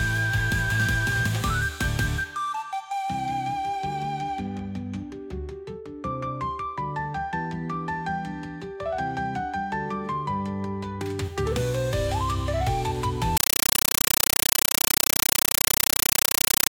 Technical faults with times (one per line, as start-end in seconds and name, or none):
13.37-16.71 compressed stream played as audio